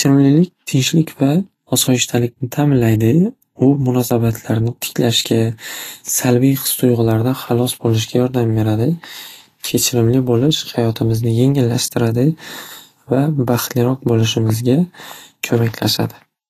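Vorbis compression runs through the whole recording, with nothing above 14.2 kHz. The speech sounds hissy and grainy, its consonants blurred, as coarse treble quantisation likely trades fine detail for noise, which fits a low bitrate around 35 kbps.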